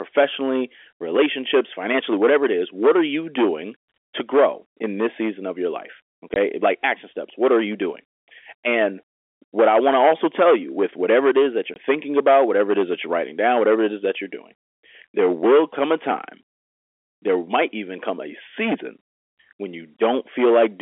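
From the first second to the last, the speech is pushed into hard clipping. Something in the chain is being driven about 9 dB past what it can carry, so a few percent of the samples hit the ceiling and get sliced flat. Those squared-off peaks throw harmonics way up the spectrum, and you hear it as a gritty, crackly edge on the peaks.

At 6.34 s, right after "season of your life" and just before "like action steps", there's a packet loss filled with silence: a 20 ms hole, which fits a single lost 20 ms packet, with the receiver just dropping in nothing. The same thing happens at 11.74 s, between "whatever it is that" and "thinking about whatever it", another 20 ms dropout with the same hard cut. Both gaps are short. The G.711 telephone coding underneath keeps everything in the narrow phone band, roughly 300 Hz to 3.4 kHz, with at most faint codec damage, so the crackle and the dropouts are the things that stand out.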